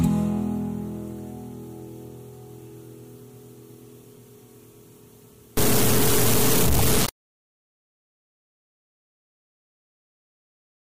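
From 5.57 s to the end of the audio, a stuck bit adds a constant layer of grainy noise or distortion that tracks the waveform and also fills quiet passages with noise. This is likely a broken data line or converter holding one bit fixed at 0 or 1. At 6.78 s, a 24 ms disturbance makes the sound skip ahead, with a brief garbled or missing stretch. That length fits one 24 ms MP3 frame. The likely cause is a broken MP3 bit reservoir, where frames were cut out and the next frame read borrowed data that actually belonged to a different frame.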